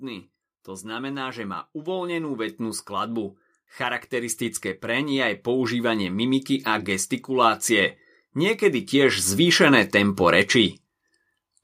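From 0.05 to 2.9 s, then 3.77 to 9.86 s, automatic gain rising lifts speech and background together, by about 6 dB then about 10 dB, seen as a steadily widening waveform envelope.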